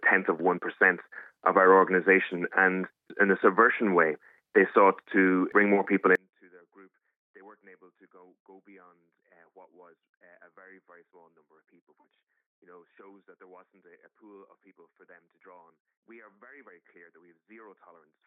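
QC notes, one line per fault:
6.15 s to the end, one channel inverted: when the channels are folded to mono, the sound collapses to a faint remnant, dropping by about 32 dB from 6.15 s onward, with centred content almost entirely gone. What survives is only the difference between left and right. The likely cause is reversed polarity on one stereo channel, so everything common to both cancels in the sum.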